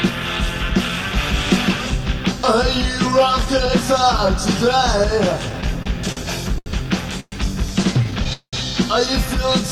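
From 5.49 to 6.68 s the audio has repeated stalls (stutter). Eleven short breaks, the longest 78 ms, fill about 228 ms, roughly a fifth of that stretch. Packets kept arriving late, the jitter buffer kept running dry, and each gap was bridged by continuing the last sound. Nothing is lost, but the sound drags and catches again and again rather than stopping once.

At 7.20 to 7.34 s there is a single call audio freeze. The sound holds for about 119 ms, fading through roughly 40 ms of silence before picking up exactly where it left off. The likely cause is packets held up in transit, emptying the jitter buffer. Unlike the stutter, this is one clean hold and resume. It shifts everything after it about 119 ms later.

Stutter returns from 8.04 to 8.55 s. This time there are five gaps totalling about 227 ms, nearly half the span. One hold lasts 196 ms and fades, though the surrounding rapid breaks mark it as part of the stutter rather than a standalone freeze.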